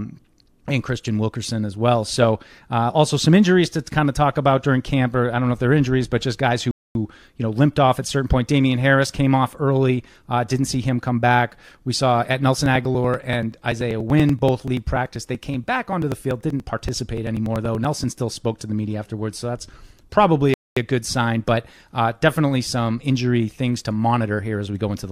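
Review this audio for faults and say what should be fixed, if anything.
Two brief gaps point to a likely Bluetooth stall. Radio interference delayed packets, the headphone buffer emptied, and playback paused until the resent packets arrived. The speech drops to silence for about 241 ms from 6.71 to 6.95 s, right after "injuries but just guys", and resumes with "you know limped off". A second gap of about 228 ms runs from 20.54 to 20.77 s, between "afterwards so that's probably" and "a good sign". Keeping the phone close to the headphones, away from competing 2.4 GHz traffic, or using a wired connection would prevent these.

Periodic USB or driver dropouts run from 12.56 to 18.13 s, starting after "saw at" and continuing until "spoke to the media". A background task blocks the USB bus or audio driver every 0.096 s, and each time a few milliseconds of audio are skipped outright rather than filled. 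That produces around fifty evenly spaced ticks across the speech, roughly ten per second. Finding and disabling the offending background process or driver polling, or raising the audio buffer size, would stop them.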